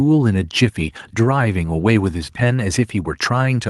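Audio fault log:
Nothing stood out on listening to this speech recording.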